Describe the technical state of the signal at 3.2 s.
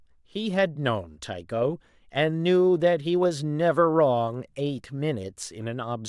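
At 3.2 s the speech signal is intact, with no dropout, click, distortion or other fault to be heard at that moment.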